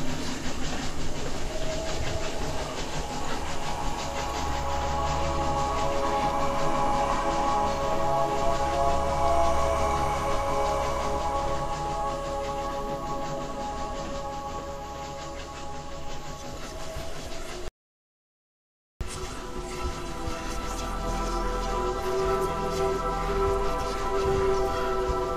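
A likely input loss, with silence written in its place, causes an audio dropout to silence in this everyday-sound recording from 17.68 to 19.01 s: about 1.3 s of dead silence, no room tone.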